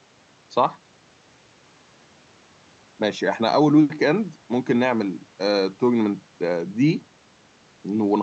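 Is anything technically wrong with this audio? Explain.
No, nothing is technically wrong: the speech arrives intact and continuous through what sounds like an ordinary call-codec path, with the top end rolling off around 8 kHz as such a path would.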